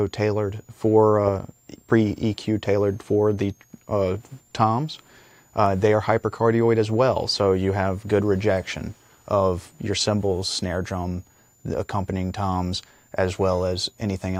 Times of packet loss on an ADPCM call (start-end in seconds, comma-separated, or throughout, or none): none